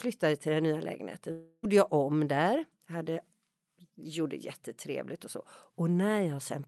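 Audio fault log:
1.31–1.65 s, long network dropout: audio packets likely stopped arriving for about a third of a second, so after "till den nya lägenheten" the receiver stretched the last sound into a fading buzz with no true silence, and speech resumes at "jag om där" with that stretch lost.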